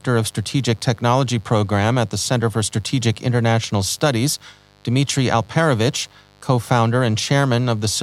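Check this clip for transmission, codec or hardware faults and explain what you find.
One fault is present: mains buzz running through the whole speech recording. Switching spikes locked to the 50 Hz supply, repeating twice per cycle, leak into the signal path, so harmonics of 50 Hz stack up into the kilohertz range. The result is a steady, raspy buzz sitting roughly 35 dB below the speech. Its edgy upper harmonics set it apart from a smooth, low hum.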